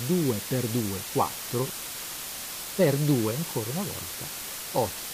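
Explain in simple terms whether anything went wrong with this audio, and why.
A loud, steady hiss runs from start to finish, almost as strong as the sound itself, but without crackle or harsh distortion. This is low bit depth with dither: the audio was stored with just 4 bits, and added random noise turned the rounding errors into smooth hiss.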